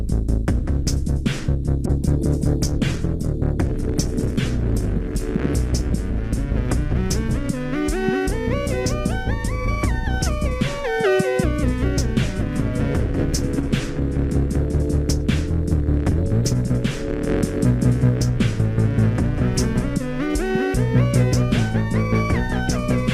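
From 1.87 s to 7.57 s there is a call bitrate drop: the bandwidth estimate collapsed and the encoder was forced down to far fewer bits, consistent with a fall from 64 to 13 kbps. The audio turns coarse, watery and muffled, worst for about 1.9 seconds, before clarity returns.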